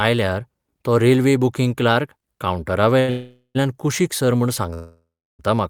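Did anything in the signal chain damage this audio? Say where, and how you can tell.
Yes. The network stage damaged it, with packets arriving late at the receiver. At about 2.99 s there is a short stall from a late packet: the jitter buffer ran dry, so the receiver held the last speech sound for about 85 ms, to 3.10 s, until the packet turned up. The sound comes out drawn out, with a slight buzz or dip, but nothing is lost. Playback then carries on from the same point, only later.

Two longer call audio freezes follow, likely from packets held up in transit. From 3.10 to 3.57 s the held sound turns into a fading buzz or hiss for about 450 ms and drops to silence for the last 70 ms. From 4.74 to 5.41 s it stretches for about 650 ms, with roughly 320 ms of silence. In both cases the speech picks up where it stopped, so gaps have been added but no sound has been lost.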